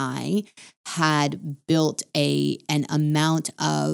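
The resampler restarted on every block: the 24 kHz to 48 kHz conversion was done separately on each 50 ms block, so each block edge lacked its true neighbouring samples. Throughout the speech, this leaves a regular ticking at 20 Hz that follows the signal.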